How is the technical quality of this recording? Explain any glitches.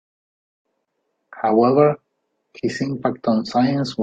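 The recording has one glitch, a gap at a join of encoded pieces at 0.85 s. Two separately encoded sections were spliced without trimming the encoder's leading delay and final-frame padding, so a gap of about 26 ms, lasting to 0.88 s, cuts into the speech with smeared edges before the speech resumes exactly where it stopped.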